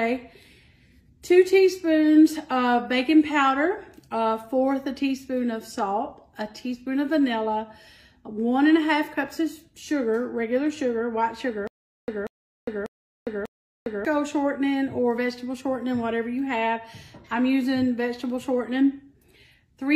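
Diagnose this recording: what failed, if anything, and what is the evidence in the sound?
Stutter with silent gaps from 11.67 to 14.05 s: the same 188 ms burst of sound plays four times, each followed by about 406 ms of digital silence, so it returns on an even 594 ms cycle. The stage is likely a stalled playback or stream buffer. Each retry replays the last fragment it holds, then runs dry before new data arrives. Whatever should have played during those 2.4 seconds is gone.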